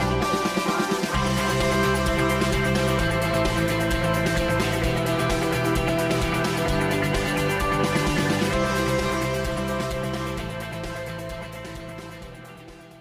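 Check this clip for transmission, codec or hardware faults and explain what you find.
One fault runs through the whole clip: channel delay (comb filtering), present from start to finish. One channel arrives roughly 5 ms behind the other before both are summed to mono, so shared content cancels at evenly spaced frequencies starting near 100 Hz. The result sounds hollow and phasey throughout.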